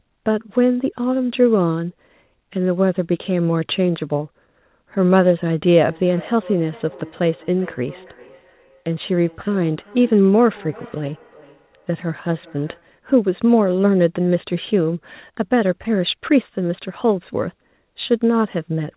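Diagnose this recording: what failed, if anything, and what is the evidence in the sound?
Feedback echo between two devices, a call-processing failure. From 5.79 s to 12.97 s the speech returns roughly every 0.4 s, peaking about 23 dB below it. A second device nearby replays the call into this microphone. The local echo canceller misses sound it did not play.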